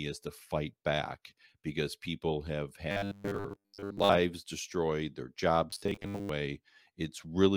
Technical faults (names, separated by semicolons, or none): robotic sound from repeated short buffers